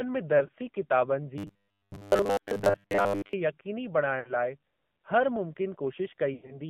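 The whole clip passes through the AMR narrowband mobile codec at 7.4 kbps. Only about 150 Hz to 3.5 kHz survives, and the speech sounds plainly buzzy and synthetic.

From 0.38 to 0.52 s, lost AMR speech frames cause brief dips and warbles. Three single 20 ms frames, 60 ms in total, are scattered across 160 ms. The decoder bridges each one by reusing the last good settings.

From 1.38 to 3.33 s comes a robotic sound from repeated short buffers. A rigid, metallic 100 Hz buzz rides on the speech. That fits a 10 ms buffer being replayed because new audio arrived too slowly, and most of the real audio in this stretch is skipped.

From 4.20 to 4.34 s, three more frames are lost, 60 ms in all, and the sound briefly wavers.

At 5.36 s there is a jump in the sound. Roughly 5 ms is missing, likely a dropped buffer (overrun), with the two sides joined directly.

From 6.34 to 6.59 s, six frames are lost, 120 ms in total. 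One run lasts 100 ms, so the sound stretches out and fades toward silence before it returns.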